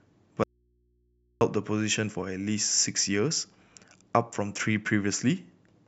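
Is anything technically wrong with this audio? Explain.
Yes. From 0.44 to 1.41 s the speech drops out for nearly a second, leaving only mains hum roughly 40 dB below the signal, an audio dropout to a faint residue. The likely cause is a lost feed with the downstream input still live. Unlike a natural pause or fade, the cut is abrupt.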